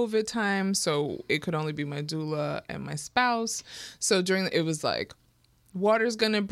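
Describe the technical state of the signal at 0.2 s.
At 0.2 s the speech signal is intact, with no technical fault present at that moment.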